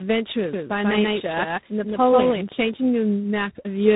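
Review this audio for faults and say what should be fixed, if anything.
Tandem speech coding runs through the whole clip. The speech was decoded and re-encoded at each link border, passing from G.729A at 8 kbit/s through G.711 mu-law to G.726 at 24 kbit/s. That is two speech coders in a row, with the second working on the first's damage. Nothing above 3.8 kHz survives. What separates this from one low-rate codec is the stacking: muffling plus G.726's rough granular noise layered over G.729A's warble. Prevent it by carrying a single codec end to end, or transcoding only once.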